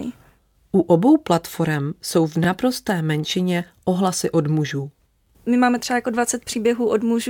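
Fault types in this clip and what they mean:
Overlapping chunks: The speech was handled in blocks of 2.5 s. Each block starts about 21 ms before the previous one ended, so that short slice plays twice at every join. It sounds like a brief click or stutter at a steady interval. The first is at 2.44 to 2.46 s, between "obou platform jsou v" and "menšině ohlasy od mužů". The second is at 4.96 to 4.99 s, just after "menšině ohlasy od mužů".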